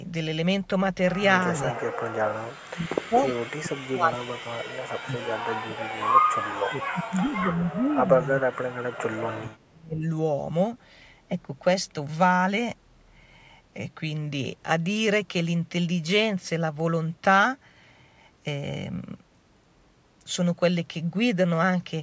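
The speech dips sharply at 1.54–1.8 s, 2.42–4.54 s, 5.02–5.83 s and 6.66–10.04 s. The drops reach roughly 25 to 35 dB. This is likely speech suppressed in double talk. The echo canceller confused the talker with loudspeaker echo and attenuated both.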